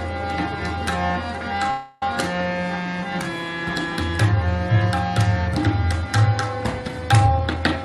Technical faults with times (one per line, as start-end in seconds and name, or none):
1.70-2.03 call audio freeze
7.26-7.83 jitter buffer speed-up